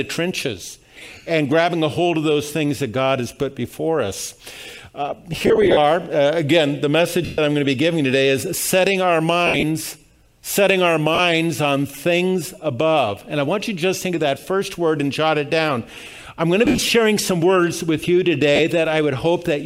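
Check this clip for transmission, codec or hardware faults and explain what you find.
The main problem is lost LE Audio frames, seven bursts of them. They come at 5.33–5.77 s, 7.25–7.38 s, 9.47–9.64 s, 11.15–11.19 s, 14.41–14.44 s, 16.65–16.89 s and 18.56–18.60 s. The worst is the first, with about 230 ms missing across 440 ms in short runs of around 50 ms. When a frame drops, the LC3 decoder repeats the last spectrum with scrambled signs, so the sound turns into a brief noisy smear rather than a clean gap. The light lossy compression underneath leaves at most a faint watery texture on noise and attacks.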